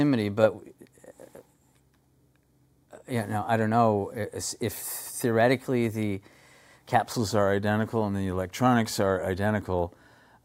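Audio captured at one rate is being played back faster with no conversion between them, a wrong sample rate fault consistent with 44.1 kHz material played at 48 kHz. From 0 to 7.13 s the sound runs about 1.09 times too fast and sits roughly 1.5 semitones sharp, hurried and raised together.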